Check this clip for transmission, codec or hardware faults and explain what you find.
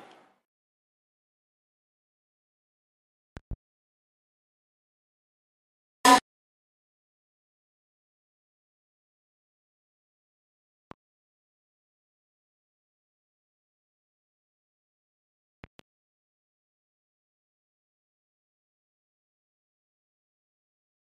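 Loud pops occur three times: a double pop at 3.37 to 3.55 s, a single pop at 10.91 to 10.95 s, and another double pop at 15.64 to 15.83 s. Each is likely a sudden voltage pulse, from a plug, switch, static or driver glitch, added to the signal and shaped by the downstream circuitry. They stand roughly 15 dB above the sound, which continues underneath.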